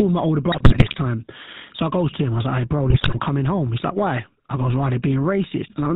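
The whole clip carries the sound of the GSM full-rate codec. The speech has a buzzy, gravelly roughness and nothing above 4 kHz. The codec models the vocal tract and excites it with a regular pulse train that keeps only every third excitation sample. That coarse excitation is what gives the grit. Its 13 kbps rate leaves the damage plainly audible from start to finish.

GSM bit errors break in from 0.52 to 0.95 s, right after "my older". Corrupted bits reached the decoder, so filter, pitch or gain parameters were wrong for a run of frames. The speech turns to squawks and gargling. A second burst follows from 2.9 to 3.2 s, between "was like hey bro" and "coming home", with the same distorted, popping character.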